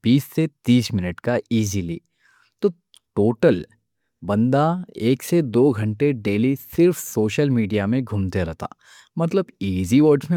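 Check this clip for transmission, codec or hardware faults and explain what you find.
The speech has been through repeated lossy coding throughout, most likely generation loss from MP3 encoded about three times at rates that sound near 140 kbit/s. Each re-encode quantises on a shifted frame grid, so smearing, swirly noise and hollowness accumulate, consonant attacks blur, and nothing reaches above 20.1 kHz.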